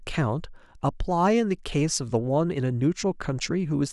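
Speech recording, no technical faults.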